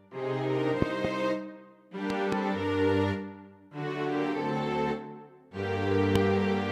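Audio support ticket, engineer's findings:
Loud pops: double pops at 0.82–1.07 s and 2.10–2.35 s, single at 6.16–6.18 s, peaking about 20, 15 and 20 dB over the sound, which keeps going underneath. Likely a connector, switch or static discharge injecting voltage spikes.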